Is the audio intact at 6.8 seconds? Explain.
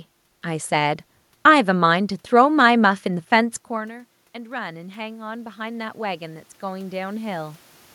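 No. Automatic gain rising runs from 3.04 to 7.58 s. After the input dropped by about 18 dB when the talker moved back, the gain control slowly raised its level by about 9 dB, so the voice and room noise swell together at 6.8 s.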